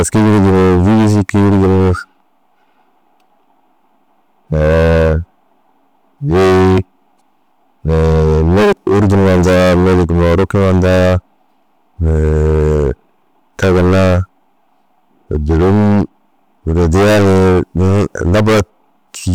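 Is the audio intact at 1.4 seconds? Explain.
No. At 1.4 seconds, as throughout the clip, the speech carries a harsh, buzzing fuzz on every loud syllable. This is hard clipping: the signal is driven about 21 dB past what the stage can pass, so roughly a fifth of samples are flattened.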